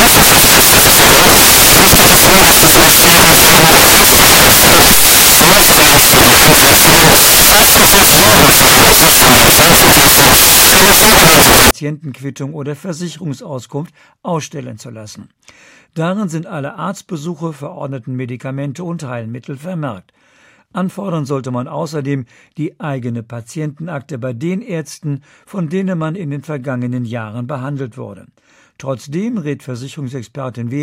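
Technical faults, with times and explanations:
0.00–11.71 s, samples built from the wrong bytes. Each sample's bytes are misassembled, so low bits dominate. The speech becomes loud, harsh broadband noise.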